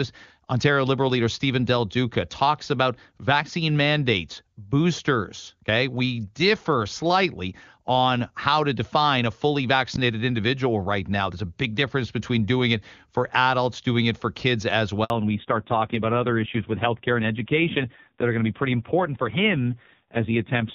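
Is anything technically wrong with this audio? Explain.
Yes, there are two faults. At 15.04 s there is a handover gap. The call switched networks, and 60 ms of speech simply drops out before sound resumes. From 15.1 s to the end comes a fallback to narrowband. The clear HD Voice sound gives way to a dull, rough tone, with nothing above 4 kHz. The harshness points to a low narrowband rate, around 5.9 kbit/s.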